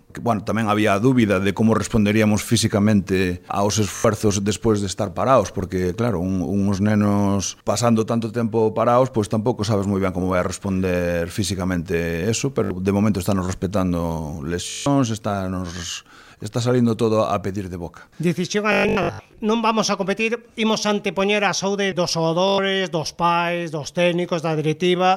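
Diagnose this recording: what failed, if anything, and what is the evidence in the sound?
Bluetooth stutter on the wireless link: buzzy repeats at 3.96, 12.64, 14.70, 18.72 to 19.34 and 22.48 s, the receiver replaying its last buffer over lost packets.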